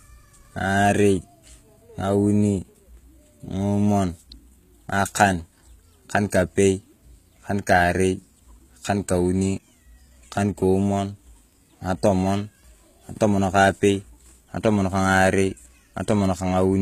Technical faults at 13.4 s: HE-AAC compression

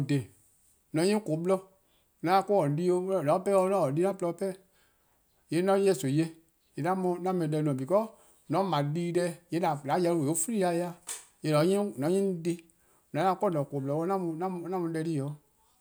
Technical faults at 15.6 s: none

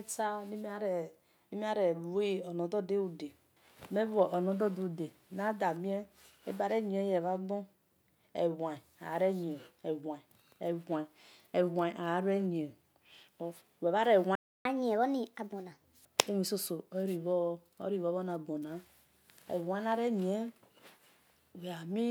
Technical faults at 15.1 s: catch-up at higher speed

